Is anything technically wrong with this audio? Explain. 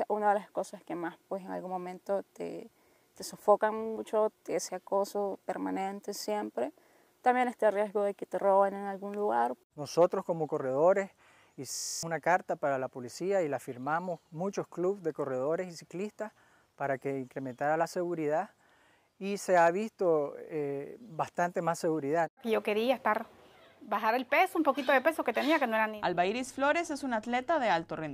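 Yes. From 11.75 to 12.03 s the audio stops moving forward and a single fragment of about 23.22 ms repeats 12 times at 43.1 Hz, giving a rapid mechanical repetition in place of the sound. This is a system hang loop: the computer or its driver froze while the sound hardware kept replaying the same ring buffer, which fits a 1024-sample buffer. Roughly a third of a second of the original audio is lost.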